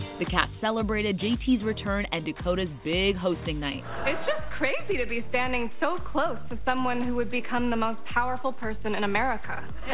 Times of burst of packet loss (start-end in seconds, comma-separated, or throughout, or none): none